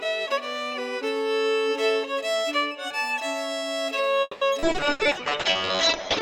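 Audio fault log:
4.21–4.44 s, call audio freeze: Packets were likely delayed in transit, draining the jitter buffer. The receiver stretched the last sound for about 200 ms, fading toward near silence, then playback resumed where it stopped, inserting a pause without losing any audio.
4.59–4.63 s, skip ahead: Queued audio was discarded as the buffer caught up on the delay built up by the freeze. Roughly a tenth of a second of sound is gone, and the material on either side is joined almost directly, so the sound jumps forward.
4.60–6.22 s, call bitrate drop: The bandwidth estimate collapsed and the encoder fell from 128 to 6 kbps for the rest of the clip. The audio band shrinks from 20 kHz to 8 kHz, and the coarse coding makes the sound muffled and rough until the end.
4.72–4.77 s, short concealed packet loss: About 60 ms of the stream missed the decoder. The receiver covered 20 ms of that gap by extending the preceding sound, then blended back into the real signal. 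The result is a brief smear, and part of the sound there drops out.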